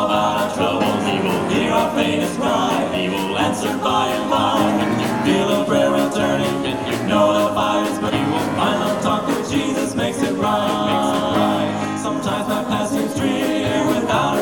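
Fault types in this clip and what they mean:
Damaged data in a compressed stream: a short stretch of the encoded stream arrived corrupted, so the decoder could not make sense of the frame data there, lost its place and had to hunt for the next valid frame header before resuming. In this clip that shows as a brief glitch from 8.08 to 8.10 s, about 22 ms of disruption cutting into the audio before normal playback picks up again.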